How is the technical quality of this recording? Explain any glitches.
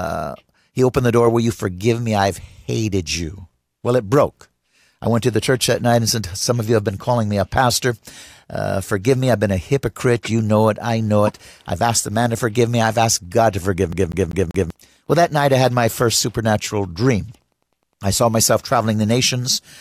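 The recording has two glitches.

Wi-Fi interference, from 5.39 s (just after "I went to the") to the end: a nearby radio's beacon every 102.4 ms is rectified by the circuit, producing faint steady ticking well below the speech.

CD stuck on one turn, 13.93 to 14.70 s: a scratch throws the laser back each revolution, so a 0.19 s fragment repeats four times with brief mutes, a rapid even stutter.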